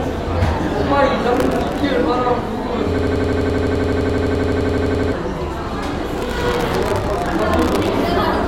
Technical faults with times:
1.34-1.80 processor overload crackle
2.99-5.12 system hang loop
6.18-7.89 processor overload crackle

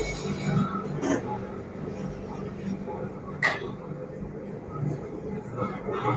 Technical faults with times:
0.00-6.17 noise suppressor applied to music or sounds

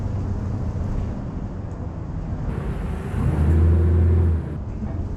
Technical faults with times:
2.49-4.57 section at the wrong speed

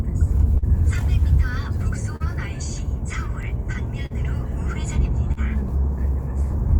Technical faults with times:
0.00-6.79 clock drift between sender and receiver
0.58-0.64 short stall from a late packet
2.16-2.22 short stall from a late packet
4.06-4.12 short stall from a late packet
5.32-5.39 short stall from a late packet

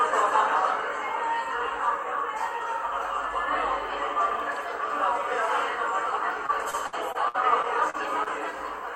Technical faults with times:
6.46-8.28 repeated packet loss (robotic sound)

